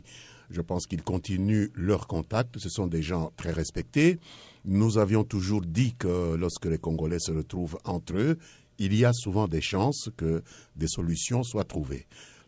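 From 10.0 to 11.5 s, regular ticks at 4 Hz point to a resampler restarted on every block. Each 250 ms block was converted on its own, in a way that fits a 24 kHz to 16 kHz conversion, so at every block edge the filter lacked the true neighbouring samples and left a small error. Unlike dropouts, nothing goes missing, and unlike a steady hum, the ticks follow the signal and fall exactly on the 250 ms grid.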